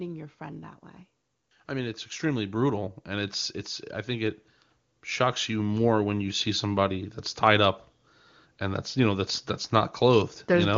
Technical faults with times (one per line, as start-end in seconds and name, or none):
1.66-3.43 automatic gain rising
5.17-7.16 automatic gain rising